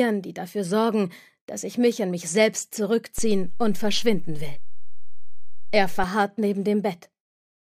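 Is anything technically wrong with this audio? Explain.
Yes. A DC step begins at 3.18 s and ends at 6.04 s. The waveform's zero line suddenly jumps by about -20 dBFS, as if an offset were switched into the signal path, then holds until it drops back. Each edge comes through as a low thump while the sound continues unaffected. On a waveform the trace lifts off centre for that stretch. A spectrogram shows brief broadband low-frequency smears at both transitions.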